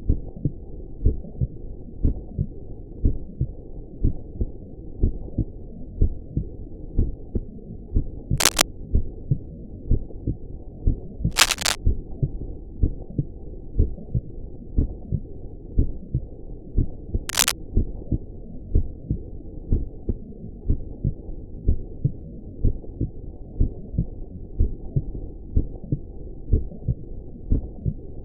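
At 8.38 to 8.63 s, 11.31 to 11.76 s and 17.29 to 17.51 s, bursts of cable scratch noise sit over the sound: dense, irregular crackling and rustling, each lasting a quarter to half a second and a little louder than the sound itself. The likely cause is a worn cable, connector or control being moved, so its contact resistance jumps about rapidly and injects that ragged noise into the signal path.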